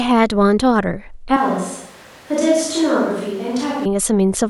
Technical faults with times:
1.37-3.85 switch to a distant microphone

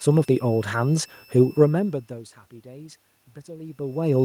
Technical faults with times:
0.00-4.25 switching supply whistle
2.63-4.25 automatic gain rising

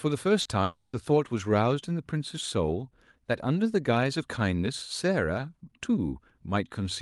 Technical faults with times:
0.41-0.47 short concealed packet loss
0.63-0.95 long network dropout

